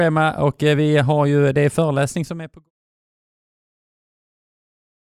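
No technical faults can be heard in this audio. Near the end the level fades out smoothly, starting at around 2 s and reaching silence by 2.71 s, with no click or hard edge.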